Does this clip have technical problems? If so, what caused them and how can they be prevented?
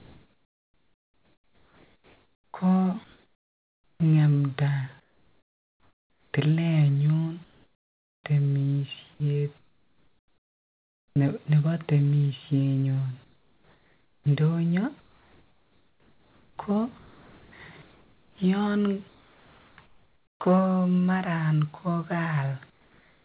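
Yes. Comfort noise in place of the background at 0.0 to 4.0 s, 5.0 to 6.34 s, 7.44 to 8.24 s and 22.7 to 23.23 s: the real background turns into steady, featureless hiss, about 6 to 10 dB quieter, likely because discontinuous transmission stopped sending during pauses. Disabling DTX, or tuning its hangover, prevents it.

Sound chopped by the voice detector at 9.14 to 11.16 s, ending just before "nebo timeshenyon", and at 13.24 to 20.4 s, starting just after it: the voice detector likely toggled repeatedly, replacing quiet stretches with synthetic fill. A less aggressive detector threshold with longer hangover prevents this.

On the call path, nothing above 4 kHz, which fits G.711 at 64 kbps.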